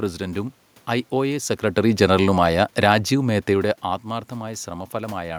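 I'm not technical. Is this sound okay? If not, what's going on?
No. Between 1.12 and 3.78 seconds the automatic gain falling fault occurs: the system's automatic volume control decided the input was too loud or too noisy and slowly turned it down. The speech sinks a little over those seconds, and the room noise behind it drops too. Around 1.5 and 3.5 seconds the speaker also seems to shift position relative to the microphone, which is natural and not a fault.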